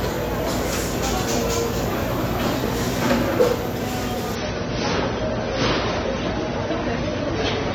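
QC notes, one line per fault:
4.35–7.74 s, adaptive stream at a lower bitrate: at 4.35 s the top end abruptly collapses, with nothing above 6.3 kHz, and the sound turns dull and swirly, with smeared transients and a watery, synthetic edge that persists to the end. There is no gap or dropout at the switch. The player stepped down to a lower-quality rendition of the stream, and the band limit and artefacts fit AAC falling from about 96 kbit/s to about 24 kbit/s.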